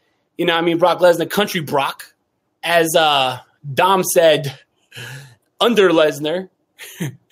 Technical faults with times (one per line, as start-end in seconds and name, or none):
0.00-7.31 gain pumping